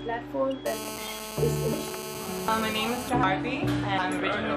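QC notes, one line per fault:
0.66–3.09 s, GSM phone buzz: A hard, raspy buzz at 217 Hz, rich in harmonics and about 10 dB below the audio, holds steady and ignores the sound's content. A nearby 2G phone on a call is pulsing its transmitter, and the audio circuit rectifies those bursts.
0.98, 1.73, 2.48, 3.23 and 3.98 s, audio missing between chunks: Every 0.75 s the sound skips forward, dropping roughly a third of a second, with the two sides butted together and no gap. The likely cause is a recorder handling 1 s chunks and losing audio at each changeover.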